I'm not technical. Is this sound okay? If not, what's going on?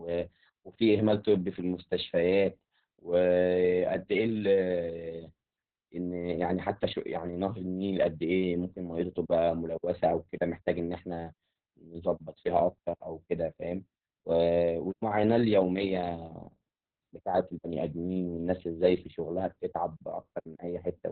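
No, not really. The whole recording has been squeezed hard by Opus voice compression, the kind used for calls over weak connections. To save space, the codec throws away everything above about 4.5 kHz, so the speech sounds muffled, like an old phone line. It also rebuilds the voice from a rough model of the throat, which makes it sound hoarse and slightly robotic from start to finish.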